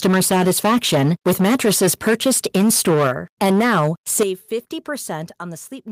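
Speech recorded through an overloaded microphone: from 0.04 to 3.11 s and again from 3.41 to 4.23 s the peaks are flattened, about 12 dB and then about 8 dB over the converter's limit, with roughly a fifth and then about 15% of the samples clipped. The result is a harsh crackle on loud syllables, unlike compression's smeared swirl. This microphone overload is likely from input volume set too high. Separately, the microphone volume stepped down at 0.06, 3.07, 4.23 and 5.25 s, by about 3, 4, 11 and 4 dB. Voice and background drop together in one instant step rather than a gradual fade, which points to automatic gain control cutting the device level after clipping.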